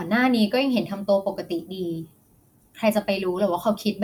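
Listening to the speech in this clip, nothing stood out as a technical problem.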